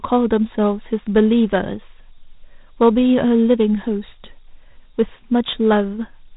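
Throughout, Dialogic VOX ADPCM leaves nothing above 3.8 kHz, a flat spectrogram ceiling, and 4-bit steps add gritty hiss riding speech, fitting 32 kbps.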